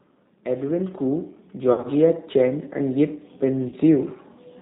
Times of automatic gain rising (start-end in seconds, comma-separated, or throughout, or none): 0.46-3.89